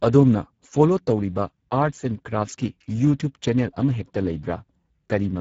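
Speex codec damage runs through this entire speech clip: the starved CELP excitation leaves it audibly hoarse and noisy, with nothing above 7.7 kHz, which fits a bitrate near 10 kbps.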